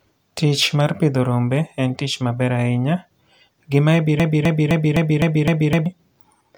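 At 4.20 s the speech locks into a broken-record loop. A fragment about 0.26 s long plays again and again, six times back to back, until 5.86 s. Each pass is identical, so the stutter sounds mechanical rather than spoken. The likely cause is a stall in the player, encoder or stream, which kept resending the last piece it held. Whatever speech belonged in that span is gone.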